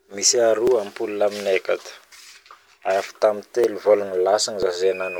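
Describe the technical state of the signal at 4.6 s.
At 4.63 s there's a tiny skip in the speech where roughly a hundredth of a second just vanishes and the two sides butt together with no gap. That's audio missing between chunks, likely a 1-second chunk boundary dropping a sliver during the handover.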